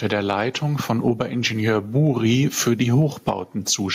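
Gain pumping runs through the whole speech clip: the level ducks around 15 dB under each loud syllable, likely from gain set too high into a fast limiter.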